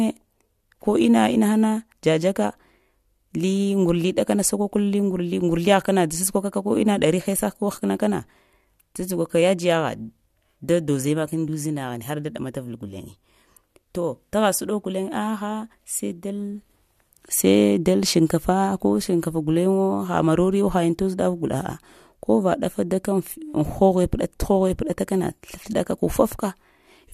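Nothing went wrong technically in this speech recording; there's simply no fault to point to at any moment in it.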